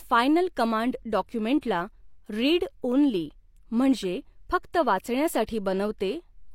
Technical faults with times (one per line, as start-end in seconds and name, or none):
1.61 pre-echo
5.45-5.48 pre-echo